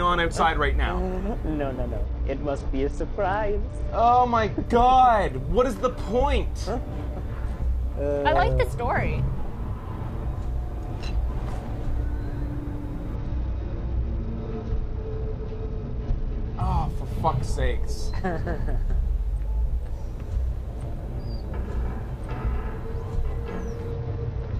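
From 2.04 to 4.66 s, 13.16 to 16.60 s and 23.92 s to the end, a Bluetooth SBC bit pool drop starves the upper sub-bands on a congested link. The treble dulls and grit rises, and the spectrogram's top bands thin out. The sound points to a fall to roughly 78 kbps.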